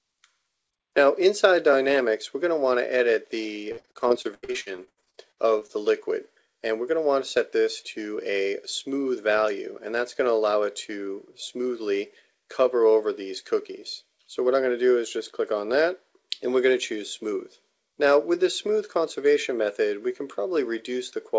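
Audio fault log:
3.72 to 5.71 s, repeated packet loss (robotic sound): for about two seconds the audio keeps dropping out, with around twenty short holes, the longest about 81 ms. Each hole gets patched by stretching the last bit of sound, and roughly a third of the stretch ends up as that filler. That's why it turns choppy. The band also stops at 8 kHz, which fits a G.722 call path.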